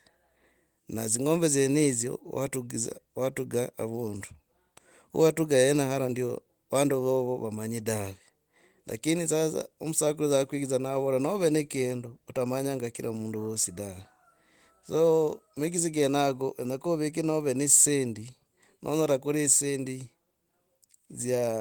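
Nothing technically wrong can be heard in this speech clip. It has passed through Opus voice compression that leaves only light traces, with the band still reaching up to about 20 kHz, which points to the hybrid mode at a moderate bitrate.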